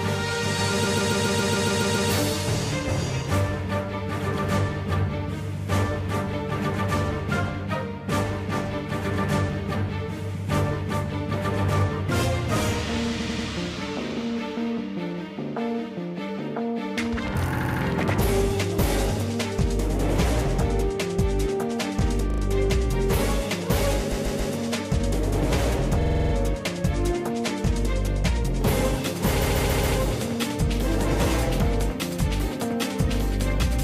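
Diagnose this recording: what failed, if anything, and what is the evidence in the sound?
Repeated frames at the codec or storage stage. Blocks of about 46 to 139 ms replay as stutters at 0.83, 13.19, 17.57, 22.30, 24.11, 26.00 and 29.41 s, the longest running to 2.08 s. Unlike dropouts, the same material repeats, lengthening the audio rather than removing time.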